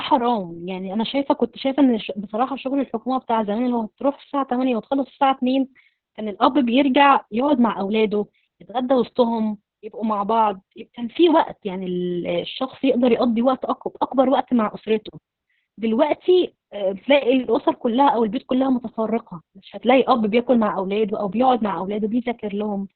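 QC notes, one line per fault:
Throughout, Opus voice compression: the speech is squeezed into a narrow band with nothing above about 4.4 kHz, so it sounds muffled and phone-like, and the damage is heavy. The voice comes out hoarse and a bit robotic because the excitation is coded very coarsely by the linear-prediction coder. That combination points to Opus running narrowband SILK at a starved bitrate, somewhere around 6 kbps, probably with long 60 ms frames.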